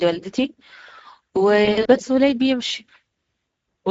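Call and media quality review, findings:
Throughout: noisy, hoarse speech, with the top band a grainy noise-like fill rather than real detail. Speex codec damage, plainly audible. Too few bits for the CELP excitation, pointing to a mid-rate setting around 17 kbps.

1.65–1.88 s: speech smears into a buzzy tone or coloured noise that fades, staying weak and distorted briefly after. VoIP packet loss concealed by the speech codec. About 120 ms lost across 200 ms, longest gap 60 ms, while the decoder extrapolates its last pitch and filter.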